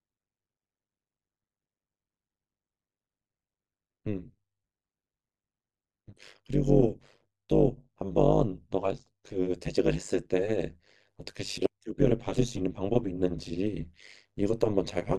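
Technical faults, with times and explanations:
Throughout, overlap-add ripple: the speech was rebuilt from windowed frames whose overlap fails to sum to a steady gain, so level swings by about 60 dB once per frame, roughly a hundred times a second, heard as a harsh, metallic buzz with extra tones around the voice.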